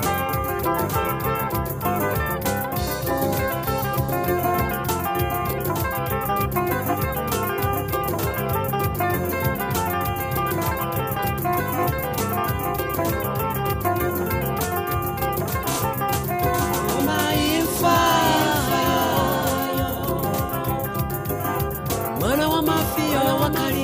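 A doubled audio track runs throughout: one full-band copy, a few dB quieter, trails about a second behind without echo's decay, likely captured twice.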